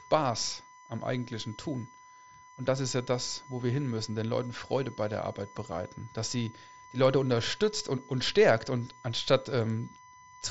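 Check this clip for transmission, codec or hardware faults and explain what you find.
One hardware fault runs through the whole clip: USB whine. A steady 1 kHz tone sits under the speech, roughly 25 dB below it. The USB bus pulls current in 1 ms frames, and that ripple leaks into the audio through power or ground. The result is a fixed-pitch whine. The top end stops near 7.7 kHz, as expected from an mSBC Bluetooth headset link.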